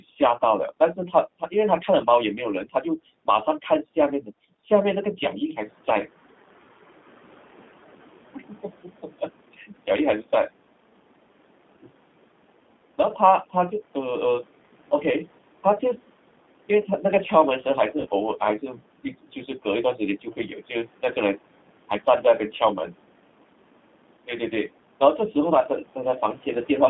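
From start to finish the speech carries plainly audible G.729 codec damage. This 8 kbit/s codec rebuilds each 10 ms frame from a vocal tract filter, a pitch predictor and a few pulses. The result is slightly rough and synthetic, and the line band runs only from about 200 Hz to 3.6 kHz. That hard ceiling sets it apart from the microphone processing, which only takes out the lowest bass. The plain rasp is also steady across the whole clip, unlike a transient glitch. The room noise that rises near 5.5 s stays about 22 dB below the speech and comes through with the same band-limited, warbling texture.

At 18.01 to 18.08 s there is VoIP packet loss concealed by the speech codec. About 40 ms of audio went missing, which fits two lost packets. The decoder filled the gap by extending its last pitch and filter settings with falling gain, so the speech briefly stretches into a buzzy tone or coloured noise that fades. 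Because each frame depends on the one before it, the sound stays weak and smeared for a short while after audio resumes. That lingering recovery is what distinguishes it from a plain dropout to silence or a hard click.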